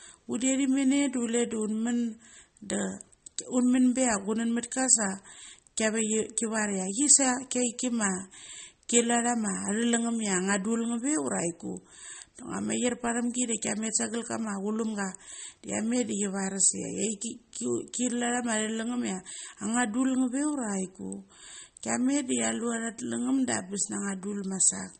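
MP3 compression runs throughout the speech and is likely the cause of its plainly audible damage. Nothing reaches above 8.4 kHz, where treble was cut for lack of bits, and weak frequency lines flicker between frames, sounding watery and swirly, which fits roughly 33 kbps.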